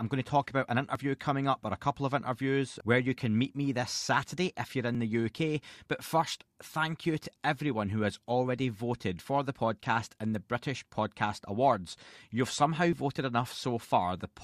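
Overlap between stream segments produces brief skips in the speech at 0.95 s (after "to talk about an"), 4.95 s (after "if you're"), 8.94 s (after "everyone who has already") and 12.93 s. Overlapping segment time stamps caused the player to discard a few milliseconds, leaving a jump in the waveform at each join. The 4-second spacing points to 4-second segments.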